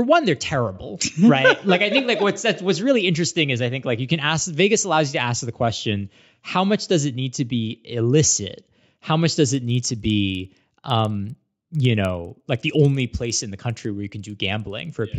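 It's a speech clip, and from about 9.45 s right through to the end there's a steady ticking or buzzing at 20 Hz that rides along with the signal. That's a resampler restarted on every block. Each 50 ms chunk got converted on its own, which fits a 16 kHz to 48 kHz conversion, so the filter never saw the real neighbouring samples at the chunk edges. Each edge picks up a small error, and those errors repeat at the block rate.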